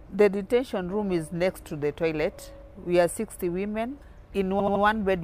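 From 4.59 to 4.82 s comes a burst of repeated frames: a block of about 78 ms, which points to a short run of compressed frames, plays three extra times, stuttering and adding about 235 ms. Unlike a dropout, no sound goes missing.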